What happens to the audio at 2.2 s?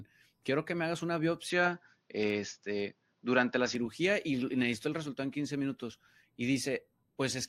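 From 1.50 to 3.75 s, between "que me hagas una" and "y necesito el resultado", the input likely switched to a poorer device. Speech loses everything above 6.9 kHz, sounds duller and boxier, shifts level by about 5 dB and gains faint new noise. Unlike a plain low-pass filter, tone, level and noise change together, with no gap at the switch.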